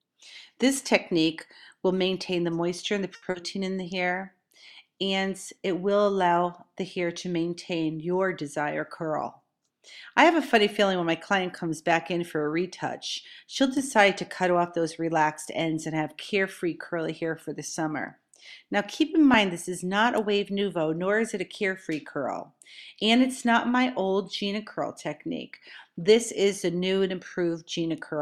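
A short stall from a late packet appears at 3.15 to 3.24 s: a packet arrived late, the jitter buffer ran dry, and the receiver held the last sound for about 70 ms before resuming from the same point. Nothing is lost, but that sound is stretched, with a faint buzz or dip, and playback now runs about 70 ms later than before. Short concealed packet loss follows at 3.30 to 3.36 s. About 40 ms of audio never reached the decoder, so the receiver invented a continuation of the preceding sound and crossfaded back into the real signal. This leaves a brief smear or small wobble where genuine audio is missing, and anything very short in that gap can disappear. A jitter buffer speed-up runs from 8.42 to 9.59 s, when the buffer had built up more audio than its target, likely because delayed packets then arrived together. To shed the excess, the receiver repeatedly cut out tiny pitch-period-sized slices, about 70 ms in total. 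Over that stretch the audio plays at roughly 106% of normal speed with its pitch unchanged, so it sounds slightly rushed rather than higher.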